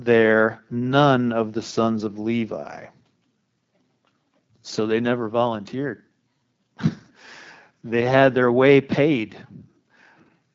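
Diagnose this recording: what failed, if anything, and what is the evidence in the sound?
AMR wideband (HD Voice) codec damage runs through the whole clip, at the codec stage. The speech keeps its wideband character, but it sounds plainly rough and raspy. That points to one of the codec's lowest modes, which fits a rate of 8.85 kbit/s. The codec models the vocal tract and rebuilds the excitation from a sparse set of pulses coded only up to 6.4 kHz, and shaped noise fills 6.4 to 7 kHz. At this rate too few pulses remain, so the harmonic structure frays into the raspy texture.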